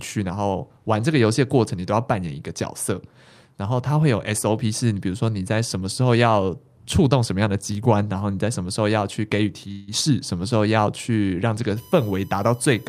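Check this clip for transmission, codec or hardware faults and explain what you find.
Two faults turn up in this speech clip: a short call audio freeze near the ten-second mark, and USB whine running through the last second or so.

From 9.71 to 9.90 s the speech stalls for about 160 ms and a fading buzzy continuation of the last sound fills the space before things pick up where they left off. That's most likely a call audio freeze: packets got held up, the jitter buffer ran dry, and the receiver padded the wait. Nothing's actually lost, but everything after lands roughly 160 ms later.

From 11.76 s to the end there's a fixed-pitch whine sitting around 30 dB under the speech. It's built on a 1 kHz series, with the strongest component way up at 14 kHz, so it comes across as a thin, high, steady tone. That's USB whine. The bus pulls current in 1 ms frames, and that ripple leaks into the audio through the power or ground, which puts energy at 1 kHz and its multiples.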